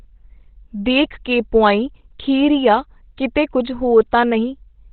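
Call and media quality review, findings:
Opus compression, whole clip, 0 to 5 s. Probable component: encoder starved of bits and likely dropped into its SILK speech mode, which fits a rate near 12 kbps. Narrowband path, nothing above 4.2 kHz. Result: heavy codec damage, speech muffled and hoarse, sibilants dulled with the upper band gone.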